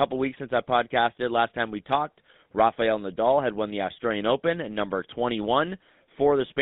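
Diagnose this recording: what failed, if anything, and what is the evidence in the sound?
Codec stage: GSM full-rate coding throughout, heard as plainly buzzy, gravelly speech from pulse-driven vocal-tract modelling, confined to a 150 Hz–3.7 kHz line band, consistent with 13 kbps.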